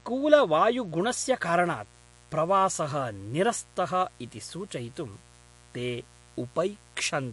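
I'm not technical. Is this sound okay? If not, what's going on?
No, this speech clip has three problems.

Mains buzz runs throughout: electrical noise from the 60 Hz power supply leaks in, adding a steady, raspy hum underneath the voice.

MP3 compression damage also runs throughout: the audio sounds watery, with nothing above 11.2 kHz, likely from saving it as a low-quality MP3 file.

Channel delay (comb filtering) affects the first second, 0 to 1.0 s, ending just before "कारणात् प्रवासः": one side arrives a hair late, so mixing them cancels some high tones, sounding dull.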